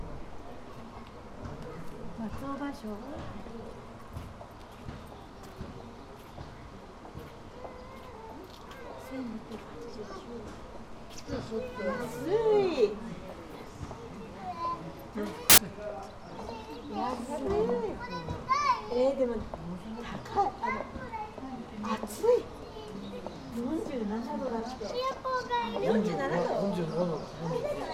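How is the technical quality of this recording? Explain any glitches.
The recording has one clear glitch, a burst of samples built from the wrong bytes between 15.50 and 15.58 s. For about 80 ms the reader combined each sample's bytes incorrectly, whether shifted by a byte, in swapped order or on the wrong alignment, so the rapidly changing low-order bits landed in the most significant position. The result is a sudden blast of loud, harsh broadband noise that wipes out the underlying sound for that brief stretch before the audio resumes.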